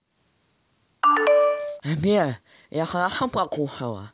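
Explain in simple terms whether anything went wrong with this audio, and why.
Nothing went wrong here: the recording holds steady throughout with no dropouts, glitches or distortion to report.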